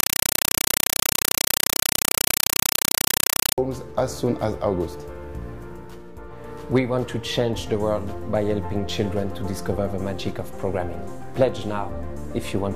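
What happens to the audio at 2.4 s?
At 2.4 s the sound is a compressed stream played as audio, from 0 to 3.58 s: undecoded AC-3 data, 5.33 ms noise bursts 31.25 times a second, heard as loud chattering static.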